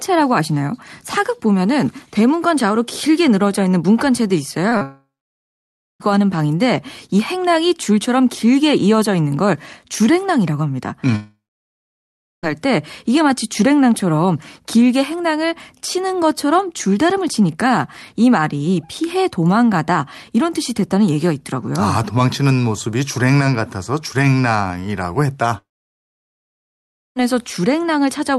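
Speech carried over a call link whose coding noise and top end stopping near 12 kHz fit Opus at around 40 kbps. Short concealed packet loss appears at 4.69 to 4.73 s and again at 4.77 to 4.83 s. Each time a few tens of milliseconds failed to arrive, and the decoder patched the gap by extending the preceding sound before crossfading back, giving a quick smear or wobble. The second patch runs straight into the first dropout. Long network dropouts, likely caused by the connection delivering no packets for over a second, occur at 4.83 to 6.02 s, 11.16 to 12.48 s and 25.58 to 27.18 s. In each, the last sound is stretched into a brief fading buzz or hiss, followed by silence of about 0.94 s, 1.05 s and 1.52 s respectively. Audio then resumes with the intervening section lost, not delayed.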